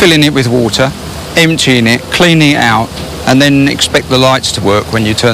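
Hard clipping runs through the whole clip: the signal is driven about 12 dB past what a stage can pass, so roughly one sample in twenty is sliced flat. Unlike gentle saturation, the abrupt flat tops spray high harmonics, giving harsh crackle on every peak.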